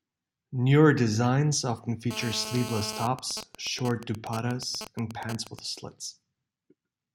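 A speech recording with a GSM phone buzz from 2.11 s to 3.06 s, just after "designs often". It is a hard, raspy tone at about 217 Hz, packed with harmonics. It sits about 10 dB below the speech and ignores what is being said. A 2G phone on a call was close to the recording chain. Its transmitter pulsed 217 times a second. Some part of the audio circuit rectified those radio pulses and turned them into this steady buzz. At 3.07 s the sound changes to GSM signalling bursts, which last until 5.59 s. The steady buzz gives way to even ticks with a longer 217 Hz buzz twice a second, at roughly the same level as before. The phone is still on the call, but its user has gone quiet. It now sends only short groups of bursts instead of a continuous stream. The circuit rectifies each group into a tick or a buzz.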